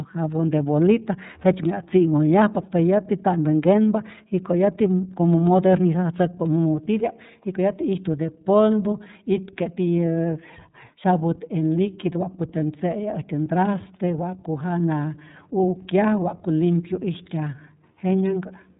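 From start to finish the speech carries iLBC codec damage, plainly audible. Nothing above 3.8 kHz survives, giving a narrowband, muffled top. Each frame's excitation is coded independently, which fits 30 ms frames at about 13.3 kbps and leaves the voice slightly rough and synthetic.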